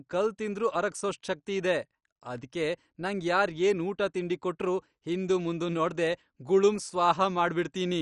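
Throughout the speech, the top end stops dead at 11.3 kHz and the remaining upper bands flicker with a gurgling, granular roughness, likely MP2 compression at a rate that fits about 48 kbps. Unlike a plain low-pass filter, the loss shifts moment to moment as bands drop out.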